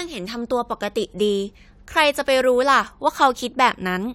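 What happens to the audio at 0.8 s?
Nothing goes wrong at 0.8 s; the speech carries on intact through that moment.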